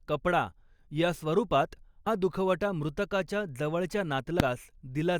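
Right after "कपडा या स्वरूपात" at 2.06 s, and again after "मृतकाच्या जवळच्या" at 4.40 s, there's a short blip from damaged data in the compressed stream: the decoder loses sync.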